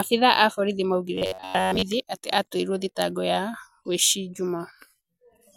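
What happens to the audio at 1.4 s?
Robotic sound from repeated short buffers runs from 1.15 to 1.83 s. Speech becomes a rigid metallic buzz at 93.8 Hz, likely from roughly 10.7 ms chunks replayed over most of the span.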